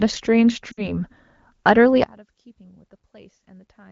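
From 0.72 to 0.98 s the speech is hit by lost AMR speech frames. Corrupted frames were thrown out, and the decoder filled the gap by repeating the last good pitch and vocal tract settings while turning the gain down. About 60 ms is missing, which fits three 20 ms frames. The sound smears briefly and drops toward silence, then returns weak or rough for a moment. Unlike a plain dropout, the gap is filled by a fading stretch of the previous sound rather than a hard cut.

From 2.04 s to the end the level falls by about 28 dB. The likely cause is one channel inverted: with one stereo side's polarity flipped, the material common to both sides cancels when they are summed to mono. The centred speech nearly disappears, and only a faint residue of the channel difference remains. A gain fault or a muted channel would keep the tone intact, whereas here mainly the channel difference is left. The light wideband codec texture underneath fits a rate around 15.85 kbit/s.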